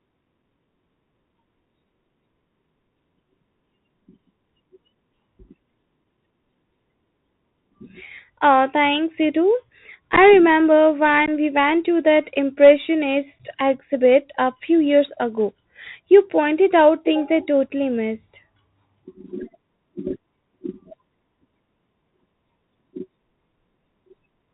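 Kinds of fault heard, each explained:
Bluetooth CVSD headset codec: the link codes speech at one bit per sample, discarding everything above 4 kHz, so s sounds turn scratchy over a constant granular hiss.
Unconcealed Bluetooth headset packet loss: a few dropped packets went unrepaired, leaving abrupt holes of 7.5 to 15 ms after "thanks you too", before "we went to that", and at 13.39 s.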